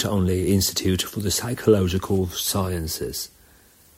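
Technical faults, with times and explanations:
Nothing to flag here: the speech comes across without any technical trouble at any point.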